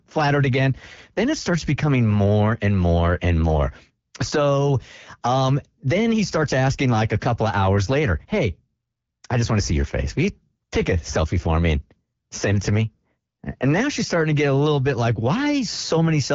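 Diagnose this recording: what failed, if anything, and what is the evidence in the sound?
Nothing failed in this recording: the speech comes through an AMR wideband (HD Voice) codec working as intended, with its top end stopping near 7.4 kHz and a character that fits the 12.65 kbit/s rate.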